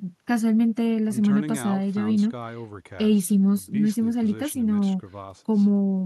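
No technical faults can be heard anywhere in the recording.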